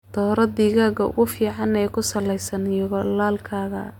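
No technical faults can be heard anywhere in the recording; the speech signal stays continuous and stable throughout.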